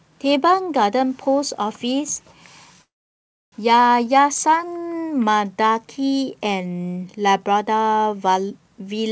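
From 2.82 to 3.54 s the speech stops, a brief fading buzz then near silence, and resumes intact: a call audio freeze, likely late packets draining the jitter buffer.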